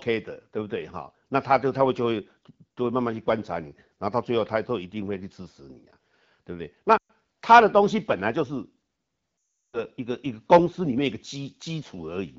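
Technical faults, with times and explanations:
6.98–7.10 s and 9.42–9.84 s, lost AMR speech frames: about 120 ms, then 360 ms, of corrupted wideband frames were concealed by repeating the last good pitch and vocal tract settings at falling gain. The sound fades out fast, within two frames, returning weak or rough. A spectrogram shows frozen harmonic bands dimming into a dark gap, and the waveform envelope decays to near silence.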